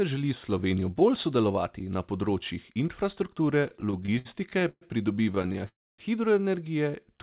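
From 3.64 to 4.83 s, speech through the narrowband call path (nothing above 4 kHz) breaks into repeated stalls, a stutter. Packets arrived late, so the jitter buffer kept running dry. About a dozen hold-ups add roughly 0.33 s of filled sound, the longest 125 ms. Nothing is lost. The speech drags and catches.

A second stutter runs from 5.23 to 5.68 s. It has eight shorter stalls, none longer than 20 ms, adding about 92 ms in total.

At 5.68 s a call audio freeze follows, lasting until 6.00 s. The last sound is briefly carried on, then about 0.26 s of silence opens up. The cause is likely packets held up in transit, emptying the buffer. Playback then resumes where it stopped, with nothing missing.

From 6.91 to 7.19 s comes a jitter buffer slow-down. The receiver repeated small pitch-period pieces to rebuild its reserve, adding 56 ms. Speech runs at about 83% speed at unchanged pitch, sounding drawn out.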